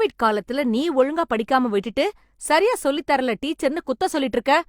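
No technical faults are audible.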